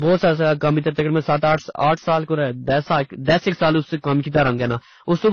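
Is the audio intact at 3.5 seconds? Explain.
No. Hard clipping runs through the whole clip, including 3.5 s. The signal is driven about 12 dB beyond what the chain can pass, so peaks are cut flat, with a few percent of samples affected. The flattened tops add high harmonics, giving a harsh fuzz on loud syllables.

The audio at 3.5 s also has no content above 6.8 kHz and a mix of different artefacts heard together, likely from transcoding between lossy codecs. The sound points to low-bitrate AAC passes, each adding its own damage on top of the last and keeping the lowest cut-off.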